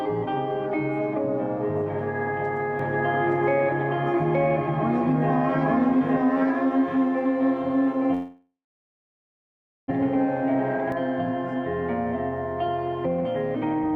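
From 2.79 s to 10.92 s there is a doubled audio track: a second full-band copy runs about a second behind at roughly the same level, likely picked up again through a slower capture path. A spectrogram shows every pattern repeated one second later, and the copy starts and stops abruptly with no decay tail.

Within that stretch, a long network dropout runs from 8.13 s to 9.92 s, likely because packets stopped arriving. The last sound carries on as a fading buzz, then about 1.3 s of near silence follows. On the waveform this appears as a flat gap. When the audio resumes, about a second of material is missing, and the later audio sits later than before.

Two jitter buffer speed-ups close the clip. The first, from 12.65 s to 13.25 s, plays at 132% speed. The second, from 13.73 s to 13.96 s, plays at 177%. Each removes roughly a fifth of a second as tiny pitch-period slices, so the audio sounds hurried with the pitch unchanged. 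On the spectrogram, events are squeezed closer together in time while the harmonic spacing stays the same.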